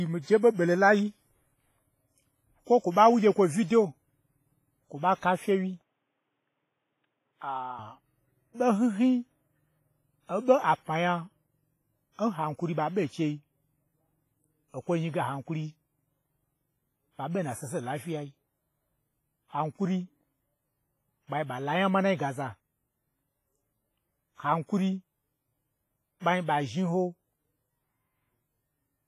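Throughout the speech, the sound carries pronounced transform-codec damage, likely WMA compression. Quantisation noise smeared over long blocks gives a ringing, washy character with hiss that breathes with the signal. Nothing remains above 15.5 kHz, which fits a low bitrate around 24 kbps.

From 5.82 to 7.79 s, the audio turns dull and narrow, likely an input switched to a poorer device. The band stops at 3.8 kHz, the level drops about 5 dB, and a new noise floor sits roughly 50 dB below the signal. There is no gap at the change.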